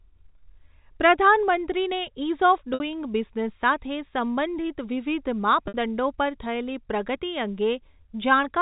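At 2.74 s, just after "પ્રધાનમંત્રીને ઇઝ ઑફ", and again at 5.68 s, after "બિઝનેસ સાથે સંબંધિત વિવિધ", the speech briefly holds on a buzzy, frozen tone for about 60 ms before carrying on. This is packet loss with pitch repetition: the receiver bridged each 60 ms gap, which fits three 20 ms packets, by looping the last pitch period. Both gaps sit in G.711 telephone-band audio.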